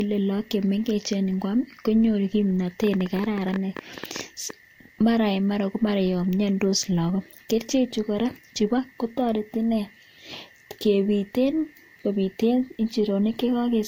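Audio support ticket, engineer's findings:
Low-bitrate audio saved at a high bitrate, whole clip: dull, swirly highs; nothing above 16.6 kHz. Likely an earlier lossy pass, roughly 50 kbit/s class, re-encoded as high-rate MP3. The new encode cannot restore discarded content. Spectrogram: hard horizontal ceiling at 16.6 kHz, patchy, smeared upper bands.

Train of clicks, 2.84–4.51 s, ending just before "mara en mara ko": about twenty similar ticks, roughly 11 per second, irregular spacing, peaks about 10 dB over the speech. Probable source: interference pulses or a faulty connection or power supply. Waveform: narrow repeated spikes. Spectrogram: thin vertical broadband lines.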